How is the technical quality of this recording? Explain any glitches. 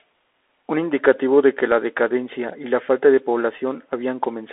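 Quality is poor. It sounds like a Bluetooth CVSD headset codec throughout. The speech sits in a narrow 300 Hz to 3.5 kHz band, with nothing above 3.8 kHz. One-bit delta coding, which fits 64 kbps, leaves plainly audible granular hiss and scratchy, distorted sibilants.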